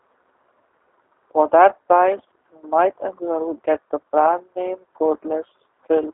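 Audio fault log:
Throughout: G.729 codec. Speech sounds rough and synthetic, band-limited to roughly 300 Hz–3.4 kHz, fitting an 8 kbit/s G.729A link rebuilding each frame from pulses.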